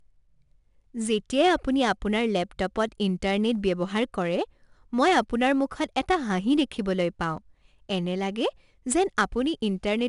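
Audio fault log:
throughout, 4-bit ADPCM compression: the encoder stores each sample as a coarse 4-bit step away from a predicted value, rescaling that step as the level changes, so the leftover error rides along as broadband noise that rises and falls with the speech. That is plainly audible here as a gritty hiss on louder syllables and roughness on sharp onsets. Nothing reaches above 10.6 kHz, which fits a reduced sample rate and a stream of roughly 89 kbps, dulling the top end.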